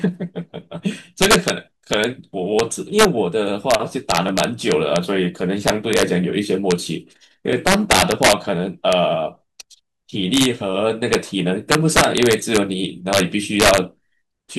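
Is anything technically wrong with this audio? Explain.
Yes, the speech has two problems: integer overflow on its loudest moments throughout, and three isolated clicks from dropped samples.

The integer overflow comes from the signal being driven about 6 dB past the largest value the integer format can hold. Instead of being limited, those peaks wrap around to the opposite sign, so each one jumps across the full range. Only a small fraction of samples, around half a percent, go over, but each produces a violent crack far harsher than clipping. On a waveform the peaks flip into spikes of the opposite polarity; on a spectrogram they appear as broadband bursts on loud syllables.

Three single clicks occur at 2.59 s, 4.29 s and 7.53 s. Each is sharp and instantaneous, with no audible gap in the speech. The likely cause is dropped samples: well under a millisecond of audio missing, so the waveform steps abruptly from one value to a later one. 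That discontinuity shows on a spectrogram as a thin vertical line spanning all frequencies, and on the waveform as a sudden kink.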